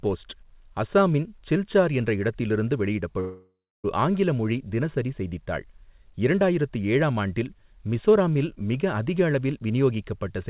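Speech carried over a narrowband call path, with nothing above 4 kHz, which fits a G.711 A-law codec at 64 kbps. From 3.2 to 3.86 s, right after "சில்சார் என்ற இடத்தில் இருந்து", the sound smears into a fading buzz and then about 0.29 s of near-silence before resuming at "ஆங்கில மொழி தினசரி செய்தித்தாள்". The likely cause is a long network dropout, with about 0.64 s of the original audio never played. On a spectrogram the last harmonics stretch out flat and blur away into a blank band, and the waveform shrinks to a thin line before the speech returns.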